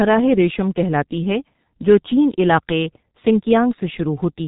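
Speech coded throughout with G.723.1, heavily damaged: muffled and hoarse, consonants blurred, consistent with a roughly 6.3 kbit/s stream. A spectrogram shows nothing above 3.8 kHz, and harmonics smear across the codec's coarse 30 ms frames.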